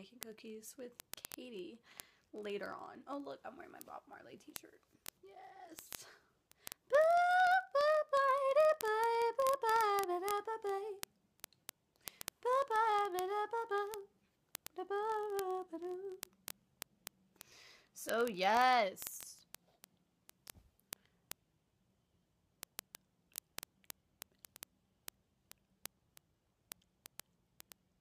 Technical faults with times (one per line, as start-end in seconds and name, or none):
0.11-27.99 word clock ticks